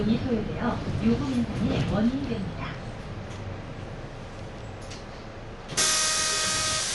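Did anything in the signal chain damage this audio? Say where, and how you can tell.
Yes, at the codec. Throughout, nothing reaches above 11.5 kHz, and tones carry rough, fluttering fill noise. That points to likely Dolby Digital compression near 64 kbps.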